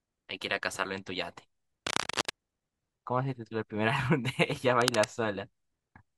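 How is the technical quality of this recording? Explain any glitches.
The recording is marred by two bursts of cable scratch noise, from 1.86 to 2.30 s and from 4.81 to 5.05 s. Each is a dense, uneven rustle, the first about as loud as the speech and the second slightly quieter. This is likely a worn cable or connector being moved, its contact resistance jumping about. Unlike isolated clicks or steady crackle, the noise clusters tightly and then stops.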